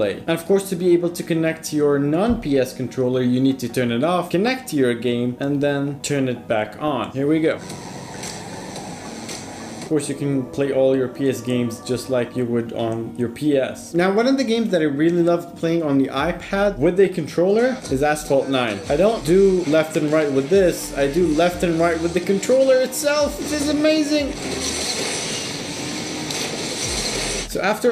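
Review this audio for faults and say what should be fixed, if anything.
DAB burbling occurs at 4.47–4.69 s, 17.05–17.10 s and 24.47–24.55 s. At these points the bit-error rate is a small fraction of a percent, enough to corrupt MP2 samples and scale factors, so individual sub-bands jump briefly in level and produce short blips of noise. Better antenna placement or a stronger multiplex signal would prevent it.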